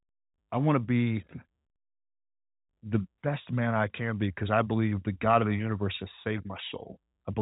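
A speech recording with no technical fault to report. It carries the narrow band of G.711 A-law telephone coding, with nothing above about 3.8 kHz.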